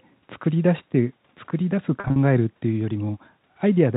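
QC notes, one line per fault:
2.0–2.16 s, packet loss with pitch repetition: about 100 ms of audio went missing in short runs, none longer than 40 ms, scattered over 160 ms, which fits five lost 20 ms packets. The receiver bridged each gap by repeating the last pitch period, so the speech there holds briefly with a slightly buzzy, sustained quality before resuming, under the narrowband telephone character of the G.711 path.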